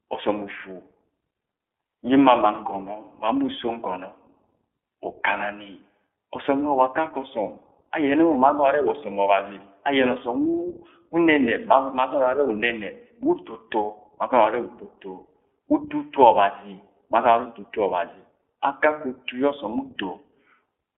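Speech recorded through the iLBC codec throughout, with a single dropout. The audio is confined to a narrowband telephone line of roughly 300 Hz to 3.4 kHz, so sibilants and consonant detail above that are simply absent. The iLBC coding damage is plainly audible as a rough, slightly synthetic texture, because each short frame's excitation is rebuilt independently with no help from the previous frame. The frame rhythm fits the 15.2 kbps mode with 20 ms frames. From 3.66 to 3.69 s there is a lost iLBC frame, consistent with a single missing 20 ms packet. The decoder bridges the gap by repeating the last pitch period mixed with noise, which produces a brief held, faintly buzzy sound instead of silence. Because the next frame decodes independently, the signal snaps back to normal immediately after the gap.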